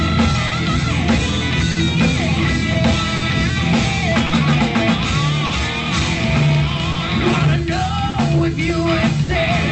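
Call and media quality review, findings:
Clock drift between sender and receiver: small timing hiccups recurring at uneven intervals across the whole clip. Sender clock about 3% slow, so the jitter buffer keeps draining; receiver stretches or repeats short pieces.

Scattered short gaps: about seven brief ticks and smears, 0.47–9.30 s, none longer than about 50 ms, roughly 300 ms patched in total. Lost or late packets concealed by extending the preceding sound. Through an Opus call path, band-limited to 8 kHz.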